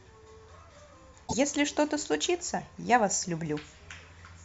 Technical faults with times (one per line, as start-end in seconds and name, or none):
1.24-1.34 damaged data in a compressed stream